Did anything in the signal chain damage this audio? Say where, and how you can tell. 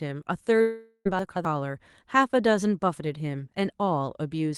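Yes. From 0.61 to 1.07 s the sound decays into a fading buzz, then about 50 ms of silence, and resumes with content gone. This is likely a long network dropout, concealed rather than muted.

From 1.19 to 1.45 s there are chunks out of order at the buffer stage. An 85 ms chunk plays two chunks late, giving a jumbled moment with three hard joins. Unlike the dropout, nothing is missing.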